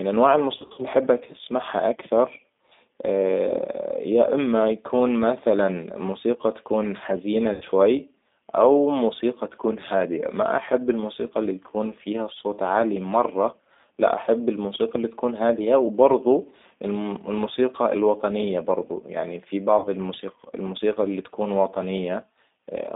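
From the first second to the end, this speech has been through the G.729 codec, the 8 kbit/s VoIP coder. It rebuilds the voice from a vocal tract filter, a pitch predictor and a few pulses per frame instead of sending the actual waveform. The line band runs only from 200 Hz to 3.7 kHz, so it sounds thin and muffled up top, and the codec damage is plainly audible as a rough, slightly synthetic edge on every syllable.

VoIP packet loss concealed by the speech codec hits three times. Between 0.58 and 0.85 s, just before "احبك تسمعها", about 140 ms is missing in scattered gaps over roughly 200 ms, with the longest single run at 60 ms. That fits around seven lost 20 ms packets. At 7.53 to 7.65 s, right after "مثلاً موسيقى تكون حزينة", 80 ms drops out. At 19.78 to 19.89 s, after "الوطنية برضو يعني في", 40 ms goes. Each time, the decoder fills the gap by stretching the last pitch and filter into a buzzy tone or coloured noise that fades. 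Because each frame builds on the one before, the voice stays weak and smeared for a moment after the audio comes back.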